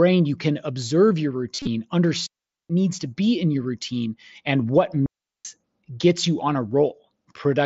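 Just after "you can observe your", from 1.55 to 1.67 s, the speech turns briefly buzzy and warbly: concealed Bluetooth headset packet loss, with about 90 ms of lost audio scattered over 120 ms, runs up to 37.5 ms, refilled by repeating recent waveform. From 2.27 to 2.70 s, before "needs to be in", and again from 5.06 to 5.45 s, between "your routine and what" and "gets you on a", the sound drops into clean near-silence with no noise burst. These are digital wireless dropouts: the link lost too much data and the receiver muted.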